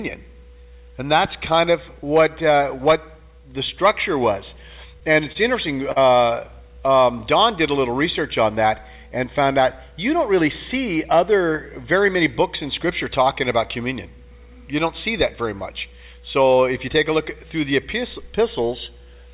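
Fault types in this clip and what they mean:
Short stall from a late packet: from 5.32 to 5.37 s and again from 5.92 to 5.98 s, the sound hangs briefly, held for about 26 ms and then 44 ms with a faint buzzy smear. Playback then resumes exactly where it stopped. A packet arrived late, the jitter buffer ran dry, and the receiver stretched the last sound until it came. Unlike a lost packet, nothing is skipped. The sound simply runs slightly later afterwards.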